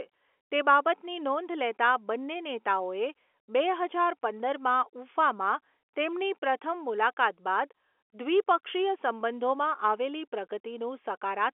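The speech contains no technical faults to describe, heard through a normal telephone band with nothing above about 3.7 kHz.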